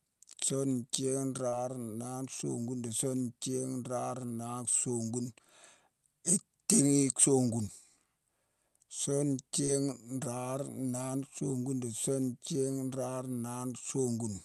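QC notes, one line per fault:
1.49–1.54 s and 9.66–9.70 s: short concealed packet loss. Roughly 40 ms, then 20 ms, arrived too late and were filled by extending the preceding sound, giving brief smears.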